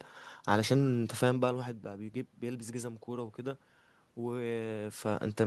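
The signal shows no technical faults; the background noise comes from the room itself, and the level shifts around 1 s and again near 4.5 s are the talker moving relative to the microphone, not anything the system did.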